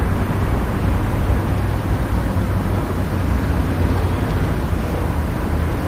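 Nothing stood out on listening to this recording of sounds.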